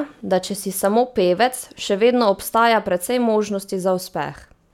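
No technical faults can be heard anywhere in the speech, so there is nothing to place in time order.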